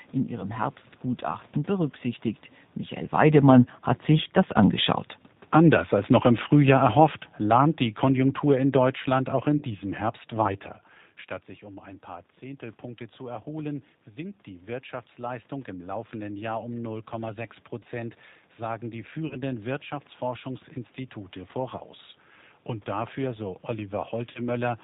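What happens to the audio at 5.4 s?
Automatic gain falling begins at 5.4 s and lasts until 9.75 s: the gain control judged the input too loud or its background noise too strong and eased its level down by about 8 dB, so the speech and the room noise behind it sink together. The G.729 codec runs through this stretch too, limiting the band to below 4 kHz and giving the speech a slightly rough, synthetic edge.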